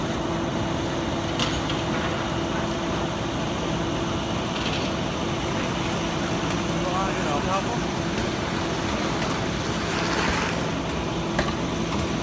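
No technical faults are audible.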